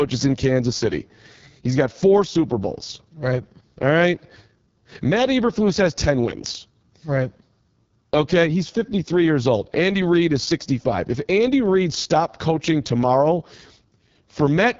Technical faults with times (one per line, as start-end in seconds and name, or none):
0.00-14.79 AMR wideband (HD Voice) codec